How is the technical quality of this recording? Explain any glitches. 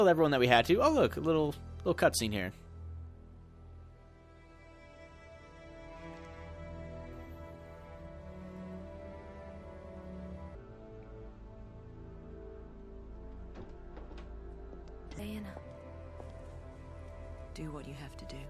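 One glitch affects the recording: a wrong sample rate fault from 10.55 to 15.19 s. For that stretch the samples play back slower than they were captured, with no rate conversion. Speed drops to 0.667 times normal and pitch falls by about 7 semitones, which fits material recorded at 48 kHz being played at 32 kHz. Because speed and pitch shift together by the same ratio, the sound turns low, heavy and dragging, then snaps back to normal pace and pitch at 15.19 s.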